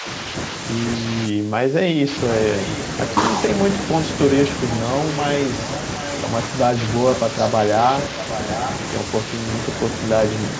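The speech dips by roughly 10 dB over the first 0.05 s, then sags again from 1.28 to 2.1 s, where most of that stretch loses level, falling by roughly 15 dB at its deepest. This is likely speech suppressed in double talk: with both ends talking at once, the echo canceller could not tell this talker from loudspeaker echo and attenuated everything it picked up.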